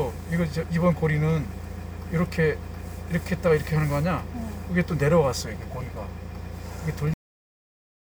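At 7.14 s the final stretch of buffers was never written out, producing a cut-off end. The sound stops abruptly mid-event, with no natural decay or fade, and drops straight to digital silence for the remaining 0.9 s or so of the clip.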